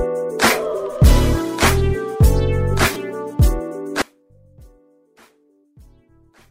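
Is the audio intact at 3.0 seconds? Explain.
No. Lost LE Audio frames at 2.94–2.96 s leave a 20 ms gap, which fits two 10 ms frames. The LC3 decoder refilled it by reusing the previous spectrum with random signs, giving a brief noisy smear. On a spectrogram, tonal lines blur into a short vertical band of noise.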